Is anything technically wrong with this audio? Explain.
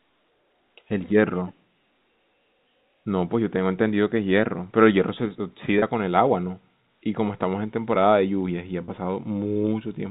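Yes. The speech has two short dropouts repaired by packet loss concealment using pitch repetition, at 5.79 to 5.82 s and 8.85 to 8.88 s. Each gap lasts about 30 ms, which fits a single lost packet. The receiver covered it by repeating the last pitch period of the speech. Because the gap is so brief, there is no fade to silence. Each spot sounds like a slightly held, buzzy tone. The G.711 telephone band around it is audible throughout.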